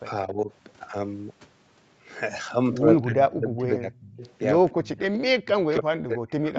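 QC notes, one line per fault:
0.26–0.50 s, speech suppressed in double talk: a shallow dip of about 10 dB over roughly a fifth of a second, likely from the echo canceller mistaking overlapping talk for echo. The voice itself gets quieter, with no added copy.
3.03–4.22 s, speech suppressed in double talk: a deep dip of about 30 dB across roughly a second. This is likely the suppressor ducking the near talker during overlap.
4.23–4.33 s, echo leak: a faint, delayed second copy of the voice arrives 280 ms late at about 30 dB below the speech, likely canceller residue. It adds sound rather than removing it.
4.77–5.01 s, speech suppressed in double talk: a sharp cut of about 30 dB lasting around a fifth of a second, likely the suppressor clamping down while both sides talk.
5.01–5.15 s, echo leak: a brief echo 280 ms behind the voice at about 20 dB below it, likely leaking through right as the suppression releases. 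It is louder than the earlier leak.
5.45–6.59 s, speech suppressed in double talk: the deepest dip, about 40 dB, running to the end of the clip, likely sustained double-talk ducking. The voice nearly vanishes rather than echoing.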